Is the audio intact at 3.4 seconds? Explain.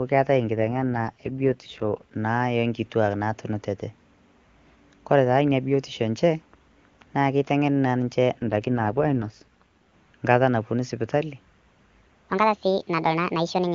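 Yes, at 3.4 seconds the speech is intact, with no dropout, glitch or other fault at that moment.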